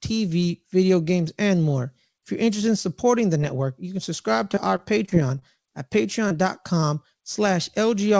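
Just after "network you can subscribe", from 4.52 to 5.72 s, the speech suffers repeated packet loss with a robotic sound. Nine short holes, the longest about 26 ms, are patched by extending the preceding audio, so roughly an eighth of that stretch is synthetic. The voice turns choppy. On a spectrogram the harmonics show brief smeared, frozen patches and soft breaks. The waveform shows small repeated stretches where the envelope flattens.

Two isolated short concealed packet losses follow, at 6.28 to 6.32 s and 6.80 to 6.84 s. In each, about 20 ms of audio failed to arrive and was filled by continuing the last sound before fading back into the real signal. Each is heard as a quick smear or wobble. On a spectrogram it appears as a thin vertical band where the harmonics hold steady or blur, and in the waveform as a slightly repetitive, smoothed cycle. The call path's band limit is audible as an absence of energy above 8 kHz, which fits a wideband call codec.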